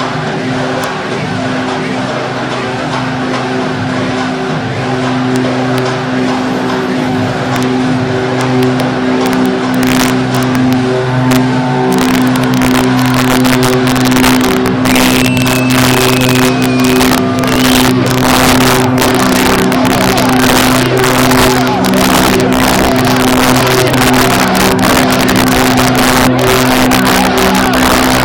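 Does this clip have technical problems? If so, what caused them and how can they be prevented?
Yes, there's integer overflow right through the clip. The level was pushed about 4 dB too hot, and instead of limiting, the loudest peaks, a small fraction of samples, wrap to the opposite sign, giving harsh cracks far nastier than clipping. Use saturating arithmetic or a limiter before conversion to integer.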